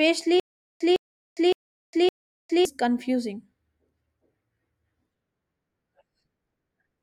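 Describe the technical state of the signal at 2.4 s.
At 2.4 s you're inside a stutter with silent gaps running from 0.40 to 2.65 s. A 157 ms burst of speech replays four times, each followed by about 406 ms of dead silence, a steady 563 ms cycle. The likely cause is a stalled player re-serving its last fragment on every retry, so the real audio from that stretch is lost.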